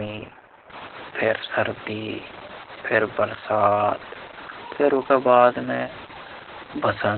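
Throughout the speech, Opus voice compression has emptied the spectrogram above 4.2 kHz. Coarse narrowband SILK coding, consistent with about 8 kbps, makes the speech muffled, hoarse and faintly robotic.

From 0.70 s to the end, the sound turns grainy and gritty. This is likely low bit depth without dither, with truncation pointing to about 6 bits. The waveform shows visible staircase steps, and the distortion sits only about 20 dB below the signal.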